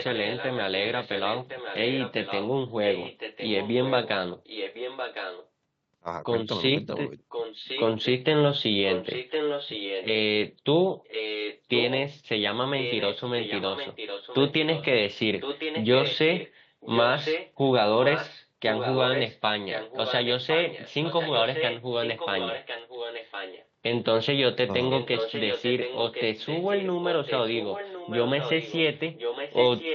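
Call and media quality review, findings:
Echo leak: delayed repeat of the speech at a fixed 1.06 s lag, about 5 to 10 dB under the direct speech, at 0–5.48 s, 7.29–8.06 s, 8.88–10.06 s, 11.04–11.97 s, 12.78–14.85 s, 15.4–23.67 s and 24.9 s to end. Likely a far-end loudspeaker echo canceller leaving residue. Distinct from room reverb: a discrete copy at constant delay, not a decaying tail. Both copies share the 8 kHz top.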